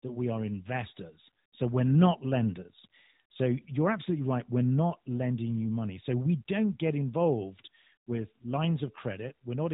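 No technical faults detected.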